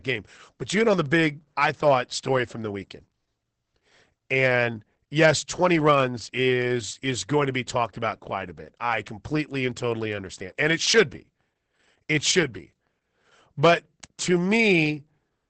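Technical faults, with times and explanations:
Throughout, Opus voice compression: the speech is heavily damaged, with nothing above about 8.7 kHz. The linear-prediction coder codes the excitation coarsely, so the speech sounds muffled, hoarse and somewhat robotic. This fits wideband SILK at around 10 kbps.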